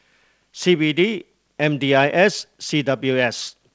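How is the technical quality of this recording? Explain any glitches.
Nothing stood out on listening to this speech recording; it carries the band-limited sound of a wideband call path, with no content above about 8 kHz, and no glitches that need explaining.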